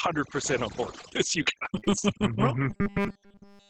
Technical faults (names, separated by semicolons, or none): overdone noise removal; repeated packet loss (robotic sound); robotic sound from repeated short buffers